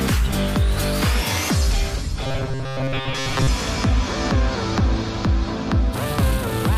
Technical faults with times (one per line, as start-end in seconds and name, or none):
2.23-3.47 robotic sound from repeated short buffers